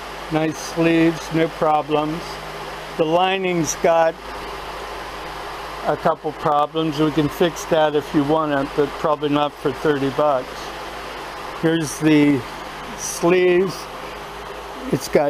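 No technical faults can be heard in the audio, and the signal stays steady and intact throughout.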